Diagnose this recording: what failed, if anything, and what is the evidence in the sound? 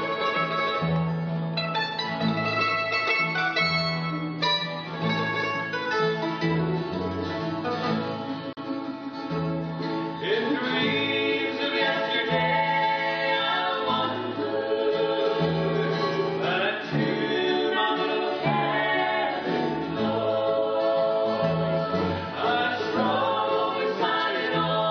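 At 8.53 to 8.57 s the sound drops out for about 40 ms, with smeared edges, then resumes exactly where it left off. This is a gap at a join of encoded pieces, a codec-stage fault: separately encoded segments were butted together untrimmed, keeping each encoder's start delay and final-frame padding.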